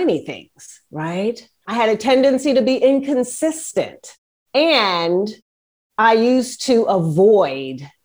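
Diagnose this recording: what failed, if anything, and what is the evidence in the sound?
Nothing failed at any stage of this speech recording, and the background dropping to silence in the pauses, with each phrase returning on time, is the noise gate or call processor muting gaps as designed.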